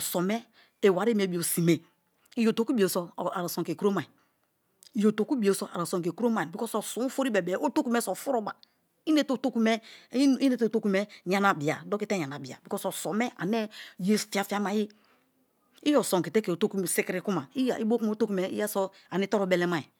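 Speech recording with no audible technical faults at any point.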